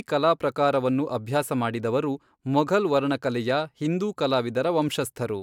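No technical faults are audible anywhere in this recording.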